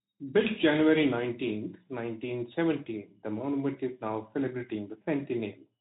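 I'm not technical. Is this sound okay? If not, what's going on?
Yes, this sound is okay; nothing in it is going wrong.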